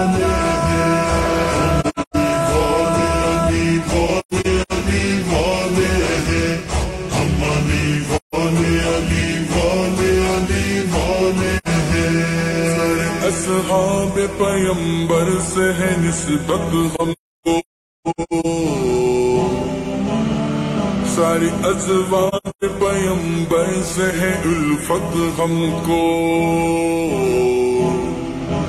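Soft-edged dropouts, fading out and back in, break the sound at 1.80–2.16, 4.19–4.72, 8.16–8.34, 11.57–11.68, 16.95–18.46 (about a second missing, in gaps up to roughly half a second) and 22.28–22.64 s. This is AAC frame loss with muting. The decoder zeroed the spectrum of the missing frames, and the overlapping windows smooth each hole's edges.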